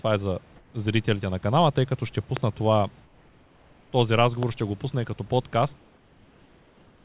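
From 0.56 to 0.74 s, comfort noise replaces the background. The room hiss gives way to a smooth, featureless noise about 2 dB quieter. The likely cause is discontinuous transmission: the sender pauses during silence, and the receiver fills the gap with synthetic noise. The background sits about 34 dB below the loudest sound.

From 2.37 to 2.39 s, a loud pop cuts in, roughly 20 dB above the signal. It is sharp and brief, and the sound continues beneath it. A likely voltage spike, such as a switch, static or a driver glitch, caused it.

From 3.05 to 3.92 s, comfort noise again stands in for the background, about 3 dB quieter and flat.

From 4.43 to 4.45 s, a second, weaker pop sounds, roughly 10 dB above the signal.

From 5.78 s to the end, comfort noise replaces the background once more, about 3 dB down. Throughout, the call codec leaves nothing above 4 kHz.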